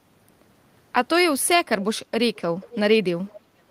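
At 2.35–2.4 s, 2.61–2.79 s and 3.26–3.36 s, an echo leak returns faint copies of the speech delayed by 485 ms, about 30, 20 and 25 dB down. This is likely from an echo canceller that let loudspeaker pickup through, and it shows as weak, repeated speech traces on the spectrogram.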